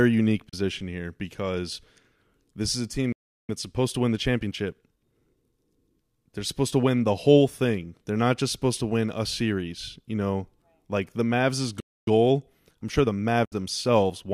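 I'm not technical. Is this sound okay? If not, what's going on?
No. The speech has three kinds of fault.

Digital broadcast dropout: the sound briefly fades to silence from 0.49 to 0.54 s and from 13.45 to 13.53 s. The receiver muted when data went missing. The gaps fit one lost frame and then two, and the speech in them is gone.

Playback stall: the speech stops mid-flow from 3.12 to 3.49 s, a pause of about 0.36 s, and again from 11.80 to 12.07 s, about 0.27 s. The player most likely ran short of incoming data and waited before carrying on.

Time-compressed catch-up: after each stall the speech runs faster at normal pitch. It plays 1.15 times faster from 3.49 to 5.91 s and 1.1 times faster from 12.07 to 14.25 s while the player recovers the lost time.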